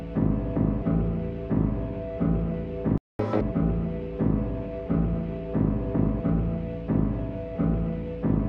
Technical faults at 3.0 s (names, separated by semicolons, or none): playback stall